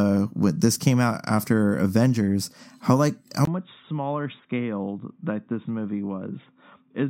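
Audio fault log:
3.45–7.10 s, input switched to a poorer device: the speech turns dull, with nothing above 3.8 kHz, preceded by a 20 ms silence at the switch. The likely cause is the input moving to a narrower-band microphone or headset call profile, which brings a drop of roughly 5 dB and a new low noise floor far below the speech. A spectrogram shows the upper band ending abruptly at 3.8 kHz. On the waveform, a brief flat gap precedes smaller peaks.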